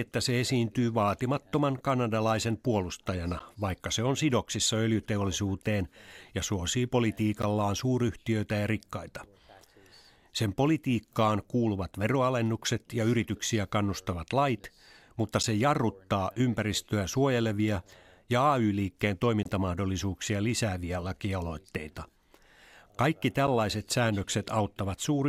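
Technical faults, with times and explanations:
3.39, 7.42, 11.43, 15.43, 19.43 to 19.46 and 23.47 s: gap between stream segments. Hard-edged silent holes of 6 to 22 ms cut the speech, one just after "sidoksissa öljyteollisuuteen ja suosii". They recur every 4 s, where segment time stamps fail to meet. The player fills each hole with silence. No audio is lost.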